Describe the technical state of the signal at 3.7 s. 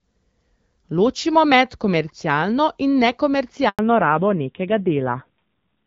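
At 3.7 s the call is mid-handover between networks, and no speech frames reach the receiver from 3.69 to 3.79 s. This handover gap fades the voice out within a few tens of milliseconds, leaving about 100 ms of silence in which whatever was said is lost.

When the audio resumes at 3.79 s, the link has come back on a narrowband codec instead of HD Voice. This fallback to narrowband removes everything above 4 kHz through to the end, so the voice sounds duller and rougher, consistent with a drop from AMR-WB to a low-rate AMR-NB mode around 7.4 kbit/s.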